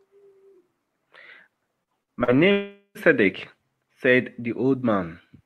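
At 1.83 to 1.90 s and again at 2.24 to 2.31 s there is short concealed packet loss. Each time about 40 ms of the stream failed to reach the decoder in time, and the receiver bridged the hole by extending the preceding sound for roughly 37 and 39 ms before blending back into real audio. Each is heard as a brief smear or wobble rather than a clean gap.

Between these, at 2.03 to 2.11 s, comes a burst of packet loss. Around 40 ms went missing in a run, and the receiver extended the last sound for about 46 ms while turning it down. The result is a short held buzz or fading hiss, after which the audio resumes slightly further on, with that stretch gone.

From 2.52 to 2.98 s the sound drops out for much longer, most likely a long network dropout. About 440 ms of audio is absent. For roughly 433 ms the receiver keeps synthesising a continuation of the last sound, which decays into a fading buzz or hiss, and about 90 ms of that stretch is left as plain silence. 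When the audio returns it picks up later in the stream, and nearly half a second of the original is missing.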